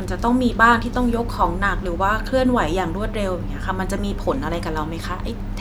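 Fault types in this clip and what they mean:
No audible faults on listening; nothing to report.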